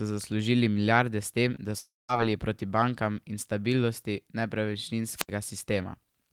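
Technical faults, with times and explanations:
1.55 to 1.59 s, short concealed packet loss: just after "zaslužili milijarde s tem", about 20 ms of the speech never arrived and the decoder patched roughly 11 ms of it by extending the preceding sound before crossfading back into the real signal. The result is a tiny smear or wobble rather than any audible gap. Unlike the longer break that follows, nothing falls silent here.
1.79 to 2.10 s, long network dropout: after "milijarde s tem da" about 300 ms of audio went missing. The receiver kept extending the last sound as a buzz or hiss that fades away, and for roughly 190 ms only silence remains before speech resumes at "proti bankam", with the lost stretch simply gone. The likely cause is a network interruption. Compared with the packet loss just before, this break is far longer, and the synthetic continuation dies out into quiet instead of blending back in.
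5.15 to 5.30 s, wireless microphone squelch dropout: the radio link of an analogue FM microphone weakened until the receiver's squelch cut the output for about 73 ms, so a brief surge of hiss comes before a near-silent hole and the speech then comes back. What separates it from the network dropout is the rising static ahead of the mute, where the network dropout instead carries the last sound forward as a decaying buzz or hiss.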